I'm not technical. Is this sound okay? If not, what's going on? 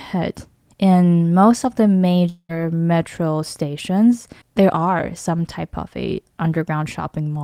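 No. From 2.29 to 2.51 s the speech turns into a fading buzz, goes briefly silent, then resumes with a fifth of a second missing, likely a long network dropout.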